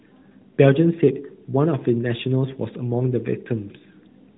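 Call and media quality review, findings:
No faults found in this speech signal; the audio is band-limited to below 4 kHz with light coding texture consistent with the AMR narrowband mobile codec at its top 12.2 kbps mode, as expected for a mobile call path.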